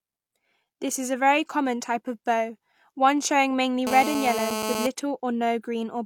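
From 3.87 to 4.87 s, after "bow one showing mainly", GSM phone buzz appears. A nearby 2G handset on a call pulses 217 times a second, and the circuit rectifies it into a steady, raspy buzz about 5 dB under the speech, far harsher than mains hum.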